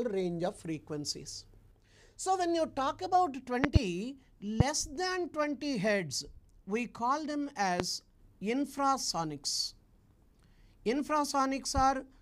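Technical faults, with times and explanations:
3.64 to 3.79 s, 4.60 to 4.63 s and 7.80 to 7.83 s: loud pop. The first event is a double pop and the others are single. Each peaks roughly 20 to 25 dB above the surrounding audio, which carries on underneath. The likely cause is a sudden voltage step or pulse, from a plug, switch, static discharge or driver glitch, added to the signal. The following circuitry shapes that pulse into a brief, sharp thump.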